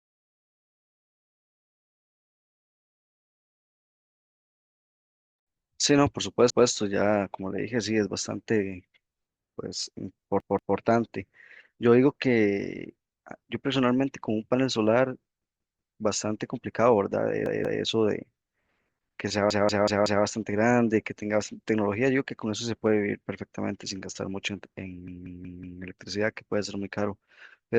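Repeated buffer stutters at 6.50, 10.40, 15.42, 17.46, 19.51 and 25.08 s: new audio arrived late, so the device replayed its last 186 ms block, fitting an 8192-sample buffer. The same speech fragment sounds one to four extra times, with hard joins.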